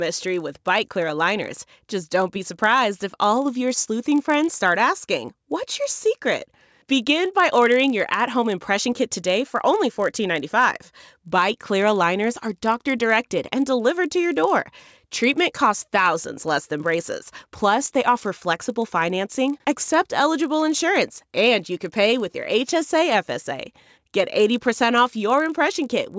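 Throughout the speech, the resampler restarted on every block: the 48 kHz to 16 kHz conversion ran on each 20 ms block in isolation, leaving a small error at every block edge. The result is a steady 50 Hz buzz that rides under the speech and drops out in pauses.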